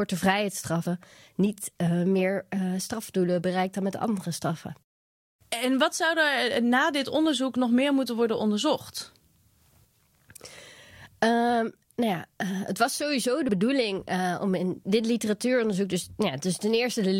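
Compressed frames skipped at 0.85 s, just before "niet meer strafdoelen bereikt", at 2.56 s after "niet meer", and at 13.48 s after "eh het was sowieso". The decoder drops whole frames, roughly 70, 20 and 50 ms, so the speech jumps ahead.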